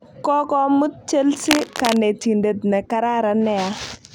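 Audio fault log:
1.39 to 1.97 s, cable scratch noise: for a little over half a second the speech is overlaid with dense, irregular crackle and rustle, fairly loud against the voice. This likely comes from a worn cable or connector being moved, its contact resistance fluctuating rapidly.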